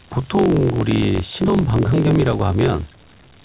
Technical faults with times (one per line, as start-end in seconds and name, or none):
0.00-3.44 converter idle tones
0.00-3.44 block size mismatch (truncated)